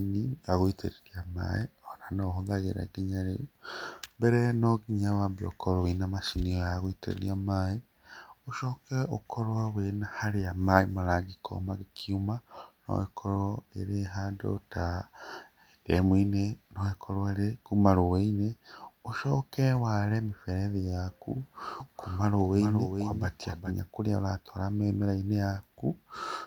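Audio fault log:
21.80–23.72 s, doubled audio track: the speech suddenly gains a second, full-band copy trailing roughly 0.4 s behind and about 5 dB quieter, so each syllable is shadowed by a clean repeat with no room decay or tonal colouring, and the copy cuts in and out abruptly at both ends. This is likely the same signal mixed in a second time through a slower capture path or an edit that leaves two copies out of step.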